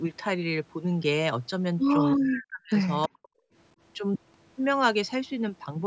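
From 2.12 to 2.76 s and again from 3.07 to 3.29 s, the speech drops sharply, by around 40 dB, almost cutting out. The likely cause is speech suppressed in double talk: the echo canceller, hearing both sides at once, attenuated the near talker as if it were echo.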